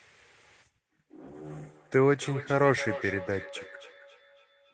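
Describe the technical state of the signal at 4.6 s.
At 4.6 s there's feedback echo between two devices, running from 1.52 s to the end. A second device's playback loops back, repeating sound roughly every 300 ms, peaking about 16 dB under the speech.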